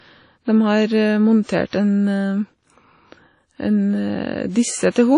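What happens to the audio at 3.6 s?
At 3.6 s the speech carries the same damage heard from start to finish, likely WMA compression: a transform codec quantising long blocks coarsely, which fits a low bitrate around 32 kbps. Noise smears across tens of milliseconds, so syllables ring and wash, with hiss swelling and fading alongside the signal. On a spectrogram, nothing appears above 10.1 kHz, weak partials drop out as gaps, and haze surrounds each onset.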